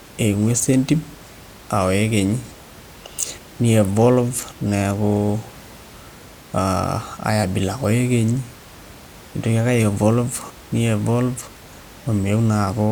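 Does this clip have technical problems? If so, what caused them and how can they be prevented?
No, the speech signal shows no technical problems, with only the room's own background noise audible about 23 dB beneath the speech, as part of the original recording.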